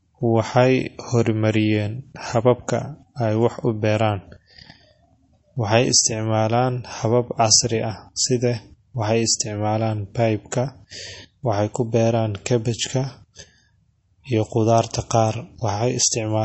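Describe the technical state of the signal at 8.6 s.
At 8.6 s, like the whole clip, the speech carries what sounds like MP3 compression, likely at a very low bitrate near 32 kbps: nothing above 8 kHz, and a watery, swirly smear.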